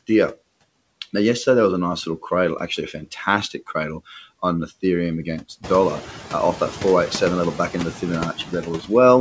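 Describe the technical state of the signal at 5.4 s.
At 5.4 s, noise suppressor artifacts run through the whole clip, cutting steady room noise by about 18 dB frame by frame. Gaps pump, dark on a spectrogram, as the room noise climbs about 15 dB around 5.5 s.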